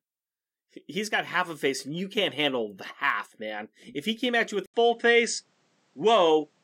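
Speech, and at 4.66 s, right after "came at you with", an 80 ms gap opens and the sound becomes duller to the end, with nothing above 9.2 kHz, a level shift of about 5 dB and fresh background noise about 45 dB down, likely an input switched to a poorer device.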